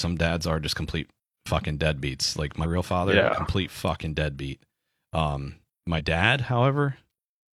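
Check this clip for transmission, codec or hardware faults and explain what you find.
Two short bursts of damaged data in a compressed stream interrupt the speech. The first runs from 2.60 to 2.66 s, between "complete fucking deadbeats like" and "father yeah complete fucking". The second runs from 5.95 to 6.01 s, just after "complete fucking deadbeat um". At each spot the decoder met corrupted frames, lost sync and skipped forward to the next valid header. The result is a brief blip of about 55 ms.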